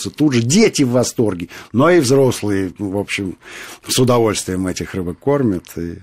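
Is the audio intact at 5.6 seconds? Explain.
Yes, the speech runs cleanly through 5.6 seconds with no dropout, click, distortion or other fault at that moment.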